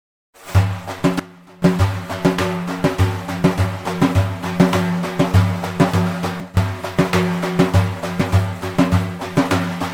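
At 1.2 s the level drops abruptly by about 18 dB and stays down until 1.62 s, then snaps back. The same sudden gain jump happens again from 6.4 s to 6.57 s. Both the sound and its background noise fall together, with no fade in or out. This points to a digital gain change applied in a single sample step. The likely cause is a setting or bit shift switched without a ramp.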